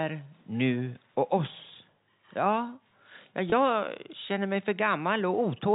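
Packet loss with pitch repetition appears at 3.50 to 3.52 s, a gap of about 20 ms that fits a single lost 20 ms packet. To fill the hole, the receiver replays the most recent pitch period of the speech, so instead of a dropout there is a brief held, slightly buzzy stretch of tone before normal speech resumes. The gap is short enough that the repeated cycle never has to fade into silence. The G.711 telephone coding, limited to 4 kHz, carries on unaffected around it.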